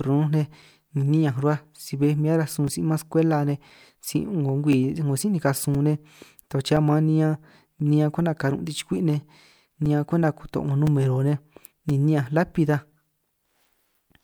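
From 0.62 to 13.95 s, regular ticks every 1.02 s: periodic USB or driver dropouts, the blocked driver leaving silent gaps of a few milliseconds.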